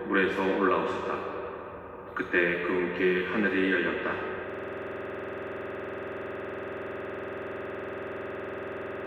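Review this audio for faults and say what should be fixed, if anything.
A system hang loop starts at 4.50 s and runs to the end. One 46.4 ms slice repeats identically about 99 times, a 21.5 Hz loop that fits a 2048-sample ring buffer. Unlike a dropout stutter, the repeats never change or recover. Prevent it by having a watchdog mute or stop the output stream when the audio thread stops refilling the buffer.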